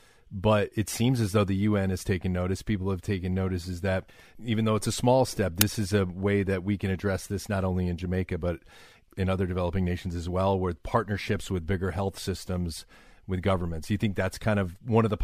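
At 5.61 s, between "it's a small step" and "is a way that", an uninitialised buffer plays out: a block of about 5 ms was sent before audio filled it, so stale memory became a sharp, loud digital burst, a spike on the waveform and a broadband vertical streak on the spectrogram.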